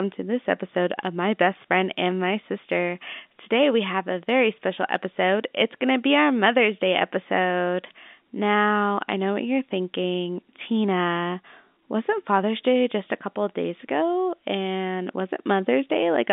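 Nothing goes wrong anywhere in the recording; the speech simply has the narrow telephone-line sound of G.711 coding, sitting in a band from 200 Hz to 3.6 kHz.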